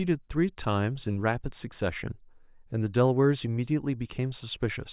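No technical faults are audible.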